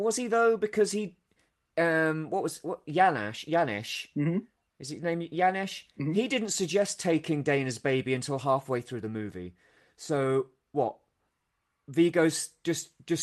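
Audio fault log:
Nothing to log: this speech clip has no fault.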